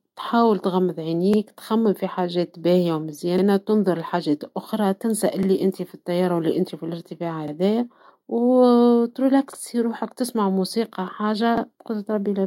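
Overlapping chunks appear at 1.34, 3.38, 5.43, 7.48, 9.53 and 11.58 s: the speech was handled in 2 s blocks that each restart about 48 ms early, so that sliver plays twice at every join, giving a regular stutter.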